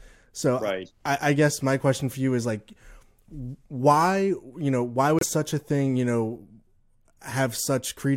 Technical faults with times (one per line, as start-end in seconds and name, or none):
5.19-5.23 broken MP3 bit reservoir